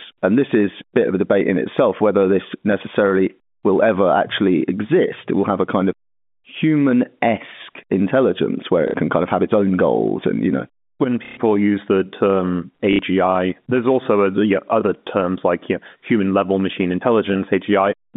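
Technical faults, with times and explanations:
8.88–8.94 s, 11.25–11.37 s and 12.93–12.99 s, packet loss with last packet repeated: right after "human esque intelligence where", "and you know when" and "use the term", chunks of audio went missing, and the receiver kept replaying the last good one. The splices don't line up with the pitch, so you get a brief robotic stutter. The middle one runs 120 ms, the others 60 ms, which fits 30 ms packets buzzing at roughly 33 Hz under the narrow telephone band.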